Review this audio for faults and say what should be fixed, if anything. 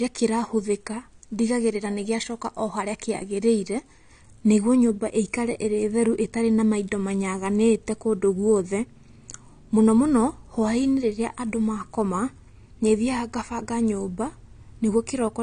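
AAC compression damage runs through the whole clip. The speech sounds dull, with nothing above 9.7 kHz. Sibilants turn fizzy and smeared, and sustained sounds warble. The likely cause is AAC-LC coding at a low bitrate, which fits roughly 32 kbps. At that rate the encoder lowers its cut-off and leaves gaps in the spectrum. That is where the swirling texture comes from. To prevent it, encode from the original source at a higher bitrate or use a lossless format.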